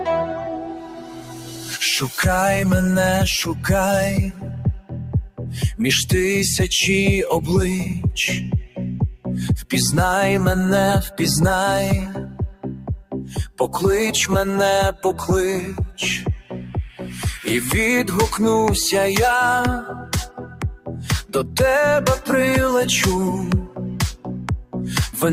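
A speech-style noise suppressor applied to music or sounds sits on the whole clip, mistaking sustained material for noise and pumping levels around 10 dB. Sound cut by the noise suppressor dips hardest at 0.25–1.72, 12.2–13.77, 14.92–15.24, 15.61–15.98, 16.18–17.26, 19.92–21.56, 23.64–23.8 and 24.16–24.75 s, sinking about 7 to 11 dB.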